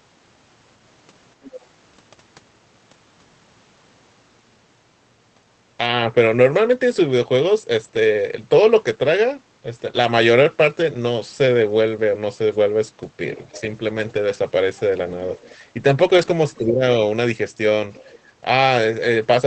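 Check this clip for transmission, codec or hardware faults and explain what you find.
Three kinds of fault are audible: a faint second voice leaking in, three stretches rebuilt from error correction, and a brief dip where both sides overlap. The Opus call path itself limits the sound to about 8 kHz.

Other side's voice leaking through occurs at 1.43 to 1.59 s, 15.34 to 15.55 s and 17.94 to 18.19 s. A faint second voice sits roughly 20 to 30 dB under the talker. The likely cause is loudspeaker echo the canceller failed to remove.

Lost packets rebuilt from error correction appear at 10.43 to 10.45 s, 14.09 to 14.35 s and 16.01 to 16.31 s. There is no gap. These stretches sound rougher and noisier. The decoder played the low-bitrate copies carried in the following packets. The lengths fit one, seven and eight 20 ms packets.

Speech suppressed in double talk happens from 16.58 to 16.83 s. 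The talker's voice dips by about 15 dB over roughly 300 ms. The likely cause is the echo canceller turning everything down while both sides spoke at once.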